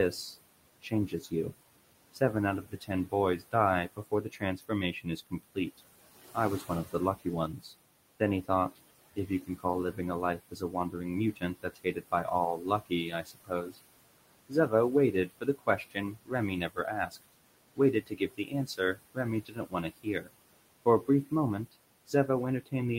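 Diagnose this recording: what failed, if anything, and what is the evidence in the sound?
Noise suppressor artifacts, from the call-processing stage. The room noise sits about 15 dB under the speech, and the suppressor pulls it down by about 20 dB in the pauses, then lets it back under each phrase. The background pumps with the speech. On a spectrogram the noise floor flickers frame by frame into scattered, isolated patches.

Speech cut by the noise suppressor, also in call processing. The gain rule misjudged weak speech as noise and attenuated it along with the background. This happens across 0.12–1.53 s, 2.13–5.8 s, 6.34–13.78 s, 14.49–20.31 s and from 20.85 s to the end. The dips reach about 17 to 22 dB. They total a few hundred milliseconds in the first span and roughly one to two seconds in each of the next three spans. Soft sounds come out swallowed. On the waveform these show as notches in the envelope, and on the spectrogram as missing speech energy.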